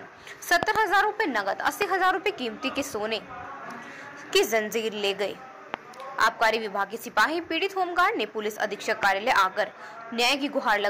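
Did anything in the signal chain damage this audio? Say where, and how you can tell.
Yes, there are loud pops, likely from voltage steps in the analogue wiring. There is a double pop at 0.63–0.78 s and single pops at 1.82–1.84, 5.74–5.76 and 9.03–9.05 s, roughly 20 dB above the sound except the one at 1.82 s, which is about 15 dB. On the waveform they appear as tall spikes, and on the spectrogram as thin full-band vertical stripes.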